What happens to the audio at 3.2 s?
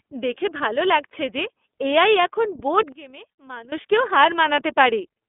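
From 2.92 to 3.72 s the speech collapses by about 19 dB into a faint residue, likely one channel inverted, so the mono sum cancels; the waveform shrinks sharply and the spectrogram fades. The iLBC codec also runs throughout: its 30 ms frames leave the speech plainly rough, with the spectrogram empty above 3.7 kHz.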